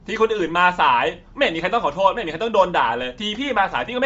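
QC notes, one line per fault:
throughout: Bluetooth LC3 compression. The speech has a breathy, grainy edge and nothing above 7.7 kHz, with plainly audible codec damage. This is likely LC3 at a low rate, which fits about 32 kbps with 10 ms frames: the upper spectrum is zeroed and refilled with noise.
0.47 s: DC step. A single low thump is heard while the speech carries on unchanged. The waveform's zero line jumps to a new offset at that instant and then sinks back to centre, as a 5 Hz high-pass drains it away.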